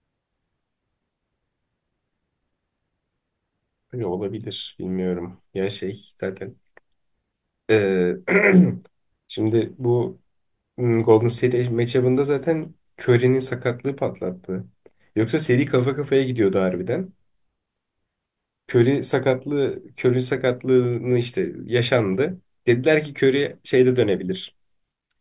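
Listening to the speech recording, nothing technical stood out.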